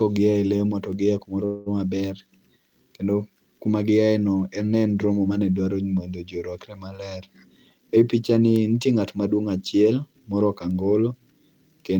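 Word clock ticks run from 0.93 s to 11.78 s, arriving about once a second, roughly ten in all. The receiving device was running on its own clock, not locked to the source across the digital link. Each time the two clocks drifted a full sample apart, a single sample was dropped or repeated, leaving a sharp tick of uneven strength at a steady pace. That one-second spacing fits a clock mismatch of around 20 parts per million.

A call audio freeze occurs between 1.45 s and 1.69 s. The sound does not stop. Instead, it is stretched on as a synthetic continuation of what came just before, filling 207 ms and fading rather than dropping to silence. The likely cause is packets held up in transit, draining the jitter buffer. When they arrived, the audio resumed where it had paused, so nothing is missing, but everything after it now runs about 207 ms later.

A jitter buffer speed-up follows from 7.69 s to 8.42 s, where the speech plays at about 108% of normal speed without any change in pitch. 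Having built up more delay than it aims to hold, the receiver trimmed short pitch-period-length slices out of the signal repeatedly, removing something like 70 ms in total. The passage sounds hurried while the voice's pitch stays the same.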